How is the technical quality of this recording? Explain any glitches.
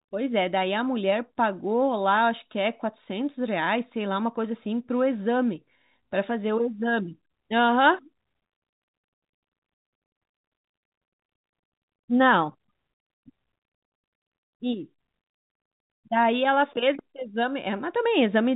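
No glitches to report: the speech is telephone-band, with nothing above 3.8 kHz as G.711 coding gives, and no faults are audible anywhere in the recording.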